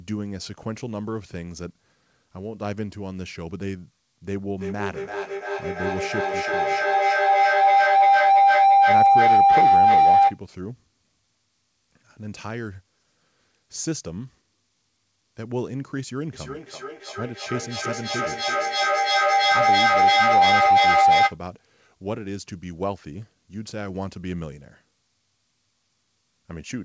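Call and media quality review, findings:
Feedback howl, 4.25–10.4 s and 16.34–21.4 s: tone near 700 Hz climbing to about 13 dB over speech, pulsing roughly every 0.3 s. Two same-room endpoints; mic-to-speaker loop gain above unity. Spectrogram: narrow bright horizontal line. Waveform: swelling, periodically bulging envelope.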